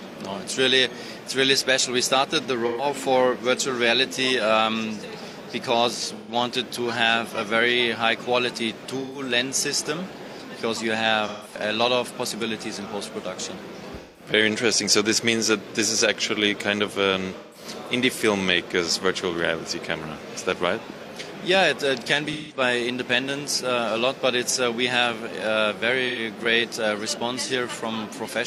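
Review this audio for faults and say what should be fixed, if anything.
AAC frame loss with concealment appears at 2.66, 6.15, 9.01, 11.27, 14.00, 17.37, 22.32 and 26.08 s. Each is a brief smeared, noisy patch where the decoder rebuilds 85 to 171 ms of missing frames from the last good spectrum. Add forward error correction or retransmission to the transport.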